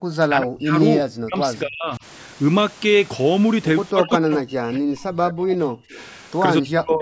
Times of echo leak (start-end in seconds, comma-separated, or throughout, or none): 5.91-6.04